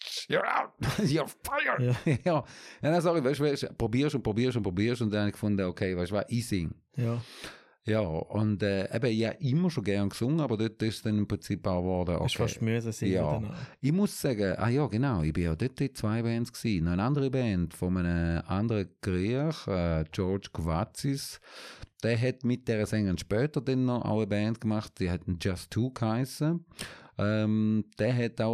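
No technical faults are audible.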